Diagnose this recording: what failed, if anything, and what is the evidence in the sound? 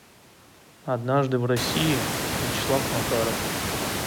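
Nothing failed in this recording: the room noise that rises by about 24 dB at roughly a second and a half, to about 6 dB below the speech, belongs to the acoustic space around the microphone, and no stage of the chain leaves any evidence in the sound.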